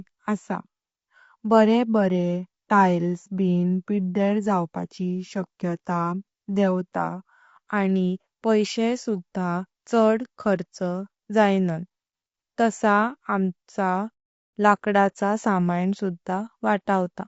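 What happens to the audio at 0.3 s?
At 0.3 s the speech carries low-delay AAC compression damage that runs through the whole clip. It sounds rough and grainy, likely from AAC-ELD's short frames at a rate fitting about 32 kbps. A spectrogram shows smeared harmonics, noise filling the gaps between them, and a thin, patchy top band.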